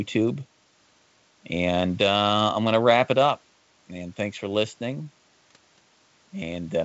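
No technical faults can be heard in this speech recording. It comes through G.722 wideband telephone coding, with nothing above about 7.7 kHz and at most a faint trace of the coding in the sound.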